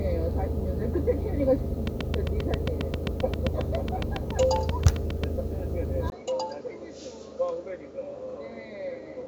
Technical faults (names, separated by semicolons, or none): train of clicks; input switched to a poorer device